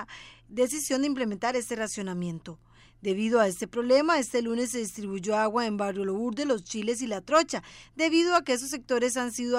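From 3.31 s to the end of the sound at 9.58 s, sample clock jitter adds a hiss that rises with loud, bright passages and disappears in silence. An unsteady converter clock, wavering by roughly half a microsecond, puts the error around 45 dB below the signal. On a spectrogram, a broadband noise haze thickens under steep, high-frequency content.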